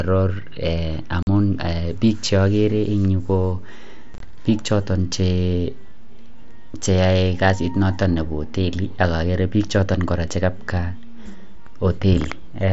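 A speech recording with two brief dropouts. At 1.23 to 1.27 s the sound cuts to a hard-edged hole of about 45 ms, and at 4.14 to 4.20 s it chops in and out, with about 30 ms missing across 60 ms and the longest gap 22.5 ms. These are unconcealed Bluetooth headset packet losses: voice packets between headset and phone failed to arrive and nothing patched the gaps, which fits several lost frames each time, heard through the light graininess of the mSBC link.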